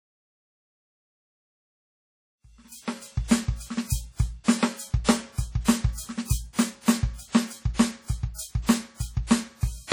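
From start to finish the music sounds washy and ringing, with a hiss that swells and recedes along with the signal, and nothing is heard above 19 kHz. It persists through the smooth fade-in that starts around 2.5 s and reaches full level at 3.43 s. The likely cause is heavy WMA compression at a low bitrate, which fits about 32 kbps. Long transform blocks smear quantisation noise over tens of milliseconds, and weaker spectral lines are discarded.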